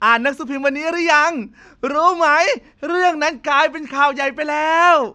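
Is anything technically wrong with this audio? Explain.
No, nothing technically wrong stood out on listening to this speech recording.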